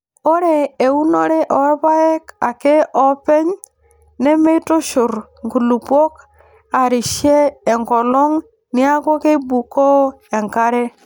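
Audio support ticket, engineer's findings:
Speech signal checked on listening, no fault found in the audio path, nothing to escalate.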